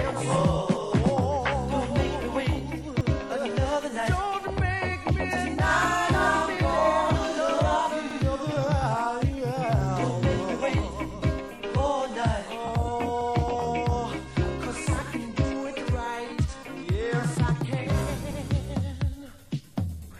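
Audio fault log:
3.01 s, 8.11 s, 13.21 s, 18.31 s: overlapping chunks. Each 5-second chunk replays 100 ms of the previous one, causing a regular stutter. Unlike dropouts, no sound goes missing.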